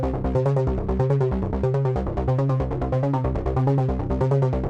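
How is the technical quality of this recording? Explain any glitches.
No audible glitches or faults.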